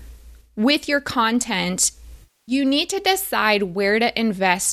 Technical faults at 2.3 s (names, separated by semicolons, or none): AAC frame loss with concealment